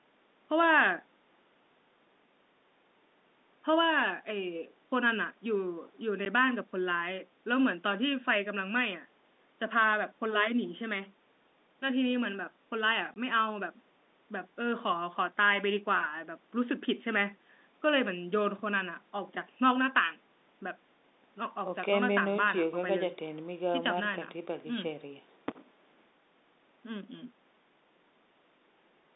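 Speech carried over a G.711 telephone line suffers packet loss filled with silence. The receiver lost audio and played nothing in its place, leaving hard-edged holes: 10 ms at 6.25 s and 20 ms from 13.14 to 13.16 s. Those lengths fit one and two 10 ms packets.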